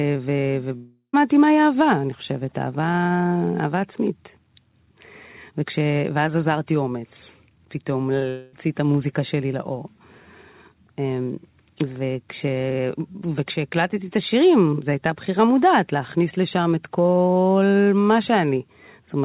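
From 0.76 to 1.15 s and again from 8.29 to 8.55 s, the speech gives way to a fading buzz, likely a long network dropout, with roughly 0.38 s and 0.24 s of audio lost. On a spectrogram, the harmonics smear into a decaying, featureless band. The first gap ends in about 0.11 s of flat silence on the waveform. Throughout, nothing appears above 4 kHz, as expected from the call's G.711 A-law codec.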